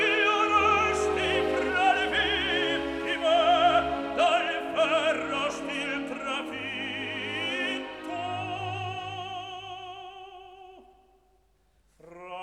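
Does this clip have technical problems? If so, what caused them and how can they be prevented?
No, the signal shows no technical faults at any point, so there is nothing to trace back or prevent.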